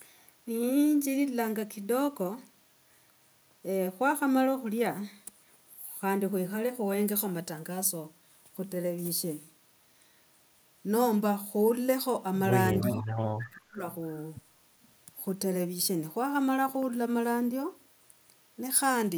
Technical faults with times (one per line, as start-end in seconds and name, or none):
12.78-13.05 echo leak
12.96-13.07 speech suppressed in double talk
13.43-13.56 echo leak
13.48-13.80 speech suppressed in double talk